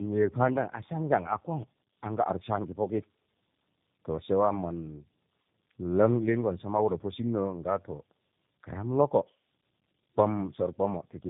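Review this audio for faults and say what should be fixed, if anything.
Tandem speech coding runs through the whole clip. The speech sounds rough, muffled and warbly, with nothing above 3.8 kHz. This fits two low-bitrate speech coders in a row, such as AMR-NB followed by G.729A. Each recoded the previous coder's already damaged output, so the errors added up. To prevent this, carry the call end to end in one codec, or pass the coded stream through transcoder-free links.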